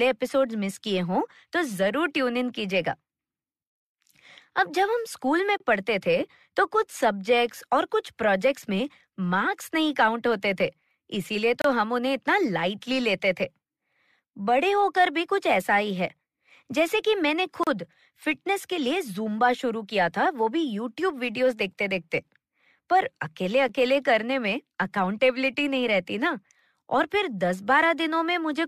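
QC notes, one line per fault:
5.58–5.60, 11.62–11.65, 17.64–17.67 and 23.68 s: gap between stream segments. Brief hard-edged silent holes of 9 to 34 ms interrupt the speech every six seconds. Timestamps at each six-second segment boundary leave a small gap, which the player pads with silence, so nothing is lost.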